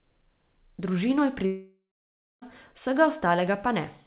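From 1.46 to 2.44 s a fading buzz then silence replaces the speech, likely a long network dropout, unlike brief glitches that conceal without going silent.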